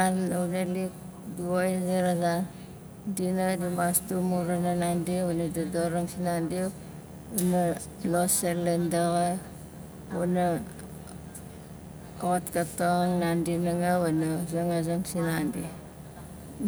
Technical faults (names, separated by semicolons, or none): video or display buzz